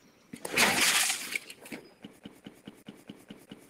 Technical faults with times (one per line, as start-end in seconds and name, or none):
0.00-0.32 sound cut by the noise suppressor
2.20-3.67 CD stuck on one turn